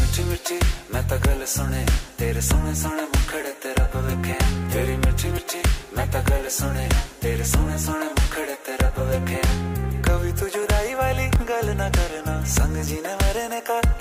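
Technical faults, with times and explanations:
5.38 s and 11.36 s: audio missing between chunks. Two brief skips about 6 s apart, each losing roughly 20 ms, likely a gap at the boundaries of 6 s processing chunks.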